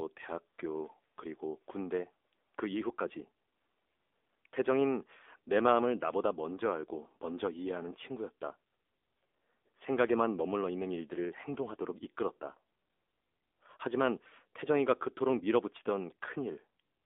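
The speech has been through the AMR narrowband mobile codec at a low bitrate, about 7.4 kbps, on a line passing roughly 250 Hz to 3.6 kHz. The missing top end and thin low end give a phone-call sound, and the sparse pulse-driven vocal-tract model makes the voice plainly buzzy and synthetic throughout.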